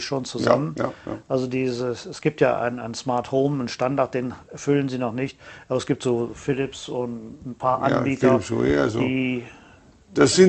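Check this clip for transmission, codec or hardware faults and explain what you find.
No faults detected.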